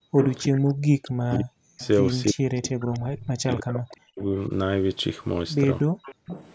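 From 0.00 to 0.17 s, the echo canceller clamped the microphone while its loudspeaker played, producing background gated by the echo canceller: the room sound drops by about 40 dB for a brief moment, then returns. The same gating recurs from 5.87 to 6.26 s, a gap of about a third of a second.

At 0.19 to 0.48 s comes an echo leak, likely from a speakerphone whose canceller let part of the loudspeaker sound back into its microphone. A copy of the speech trails 316 ms behind, fairly strong. Fainter scraps of it return at 0.66 to 0.70 s and 1.79 to 1.87 s, and a moderate stretch from 6.03 to 6.53 s.

From 0.68 to 1.81 s and again from 2.26 to 4.25 s, there is speech suppressed in double talk. With both sides talking, the canceller likely turned everything down, so the talker's speech sinks very deeply, for about a second and then about two seconds.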